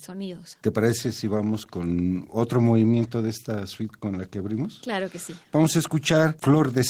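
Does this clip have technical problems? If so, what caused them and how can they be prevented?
Yes. Opus voice compression runs throughout the speech, plainly audible as a hoarse, slightly robotic quality. The sound fits hybrid coding at a low bitrate of about 16 kbps: the linear-prediction layer codes the lower band with coarse excitation, and a thin transform layer covers the top. Encoding at a higher bitrate or storing the original uncompressed would prevent it.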